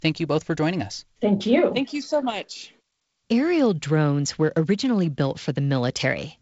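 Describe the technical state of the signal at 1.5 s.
At 1.5 s the signal is intact, with no fault present, only the band limit near 7.7 kHz and light hiss of G.722 wideband telephone coding running normally at 48 kbit/s.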